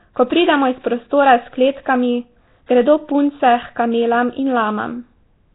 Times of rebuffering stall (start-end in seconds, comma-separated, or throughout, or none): none